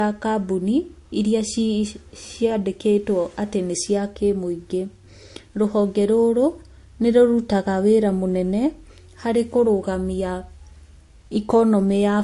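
Throughout, the speech sounds dull above 11.3 kHz, with layered swirly and smeared artefacts; likely transcoding between lossy codecs, fitting MP3 then Vorbis at around 50 kbit/s.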